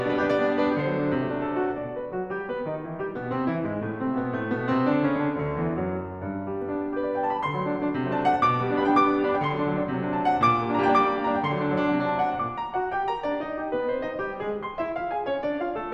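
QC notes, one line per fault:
Nothing stood out on listening to this music.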